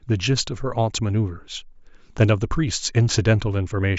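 No technical faults can be heard anywhere in the recording.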